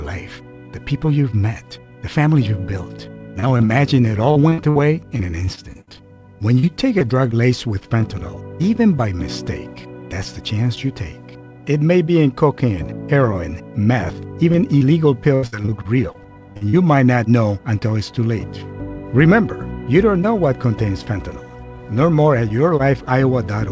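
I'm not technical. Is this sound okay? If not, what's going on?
No. Over this call connection, small pieces of audio went missing in short bursts.

Short concealed packet loss: a few hundredths of a second of audio arrived too late, so the receiver invented filler by stretching the last sound. This happens around 3.40, 3.58, 3.65, 6.59 and 6.99 seconds, each heard as a quick smear or wobble.

Repeated packet loss (robotic sound): from 4.31 to 5.89 seconds and from 14.52 to 16.75 seconds, chunks kept going missing, nine and ten times respectively. Each hole was patched before the next arrived, so the sound turns choppy and robotic, with bits dropped.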